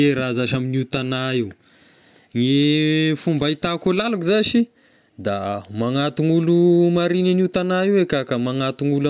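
No technical faults are audible.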